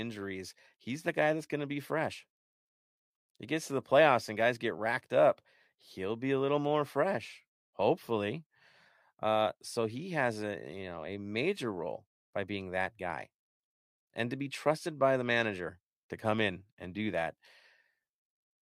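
Nothing stood out on listening to this recording of speech.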